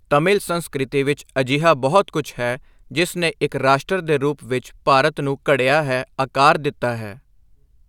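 No technical faults can be heard anywhere in this recording; the signal stays intact and continuous throughout.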